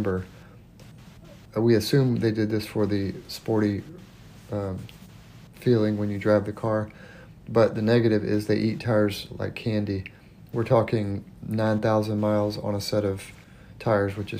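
No technical faults can be heard anywhere in the recording.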